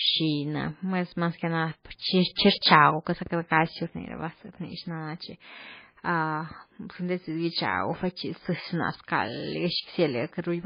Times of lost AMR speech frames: none

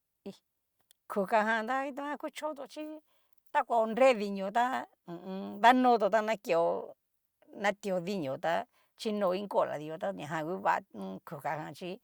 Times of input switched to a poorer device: none

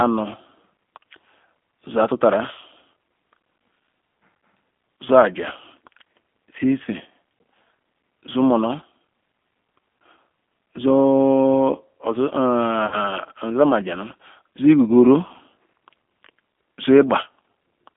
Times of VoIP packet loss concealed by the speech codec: 12.86-12.96

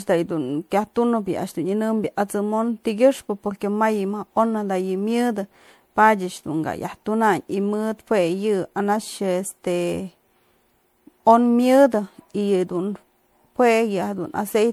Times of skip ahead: none

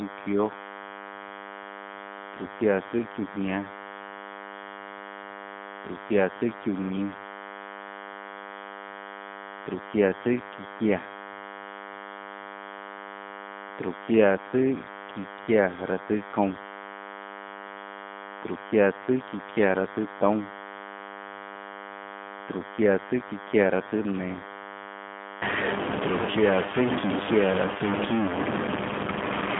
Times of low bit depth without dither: 25.42-29.59

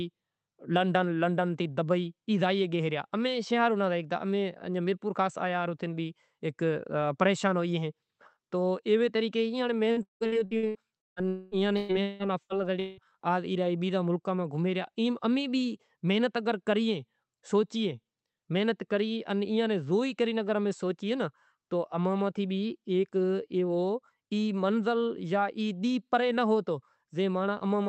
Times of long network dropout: 11.28-11.54

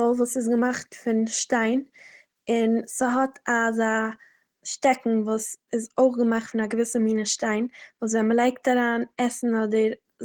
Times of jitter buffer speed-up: none

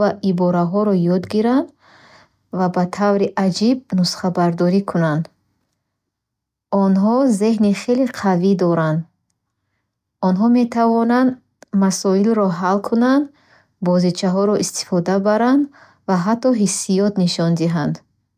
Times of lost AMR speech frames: none

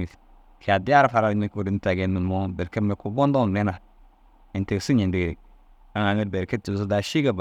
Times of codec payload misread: none

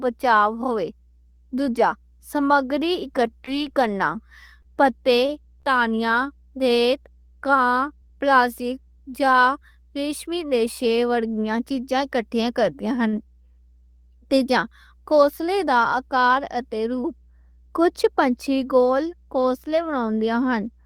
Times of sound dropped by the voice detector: none

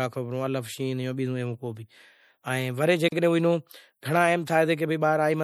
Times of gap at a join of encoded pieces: 3.08-3.12

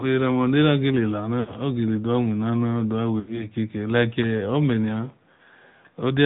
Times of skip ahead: none

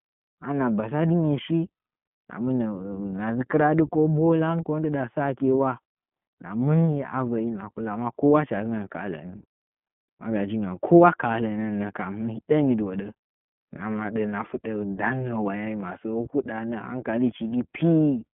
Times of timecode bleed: none

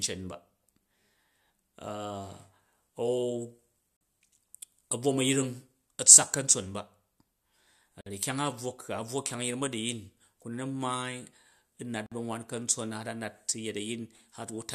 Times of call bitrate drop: none

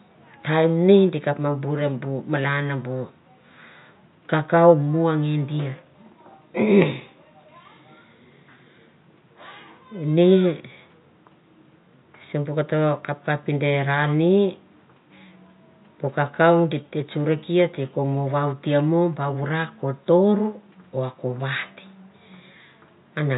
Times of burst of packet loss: none

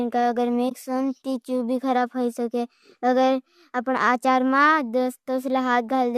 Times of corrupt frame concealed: 0.69-0.72

